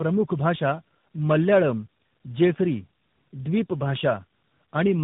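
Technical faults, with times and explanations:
Throughout: tandem speech coding. The speech sounds rough, muffled and warbly, with nothing above about 3.8 kHz. This fits a call that passed through about three speech codecs in a row, likely an AMR narrowband mobile codec, a G.726-type ADPCM link and AMR again, with G.711 mu-law joins between them. Each coder had to re-encode the previous one's damaged output, so their distortions accumulated beyond what any single link would produce.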